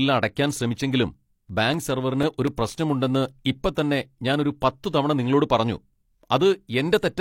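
From 1.49 s to 2.72 s the speech carries CD scratch ticks: six brief clicks, about four per second, of uneven strength, the longest around 3 ms. A scratch corrupts more data than error correction can repair once per disc revolution, and the player interpolates or mutes those samples.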